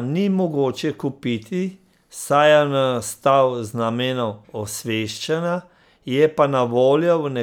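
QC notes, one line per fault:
Nothing stood out on listening to this speech recording.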